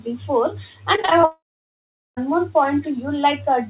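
Repeated packet loss (robotic sound) runs from 0.96 to 1.25 s. Five brief holes open in the speech, the longest about 21 ms, and each is bridged by stretching the preceding sound. Roughly a third of the stretch is patched, giving a choppy, mechanical texture with pieces missing.

From 1.25 to 2.19 s the speech cuts out, likely from a long network dropout. Nearly a second of audio is lost. The last sound trails off briefly, and then about 0.77 s of silence follows before speech returns without the missing section.

At 2.82 to 2.90 s a very faint copy of the speech sounds about 268 ms behind the original, well below the main speech. This is likely echo leak, where a loudspeaker's sound reached a microphone and the echo canceller failed to remove it.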